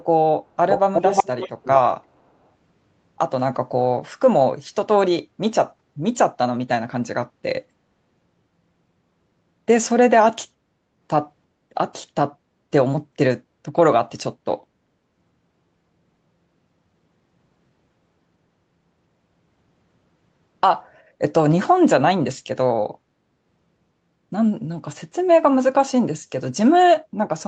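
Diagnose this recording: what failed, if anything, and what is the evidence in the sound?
The failure sits in call processing, at the echo canceller. Between 0.69 and 1.76 s a second copy of the speech trails the original by about 0.36 s, only a few decibels quieter, so it sounds like a close, loud echo rather than faint room ambience. The likely cause is an echo leak: the far end's loudspeaker output reached its microphone and was not fully cancelled. On a spectrogram the harmonic stripes repeat, shifted 0.36 s later. The waveform shows matching envelopes offset by the same gap.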